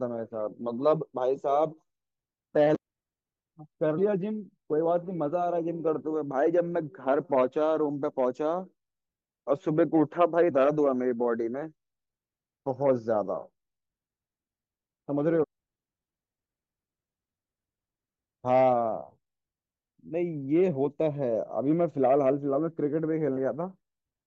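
Speech clip with damaged data in a compressed stream at 2.74–2.77 s, 3.97 s, 10.50–10.52 s and 15.42–15.44 s: corrupt bytes make the decoder misread frames and resynchronise, producing brief chirps, squawks, clicks or short holes.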